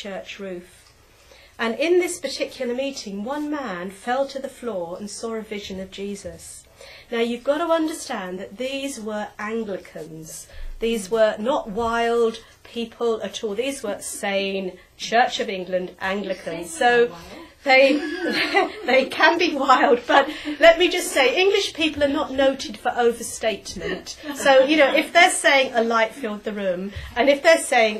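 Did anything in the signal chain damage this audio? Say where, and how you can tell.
No, no signal-chain damage heard.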